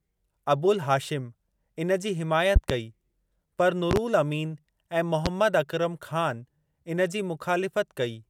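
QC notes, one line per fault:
2.56–2.73 s, 3.91–3.99 s and 5.26–5.29 s, loud pop: sharp pops jump out roughly 20 dB above the speech, a double pop in each of the first two spots and a single one at 5.26 s, while the speech carries on beneath them. This is likely a sudden voltage step or pulse, such as a plug, switch, static discharge or driver glitch, added to the signal and briefly shaped by the circuitry downstream.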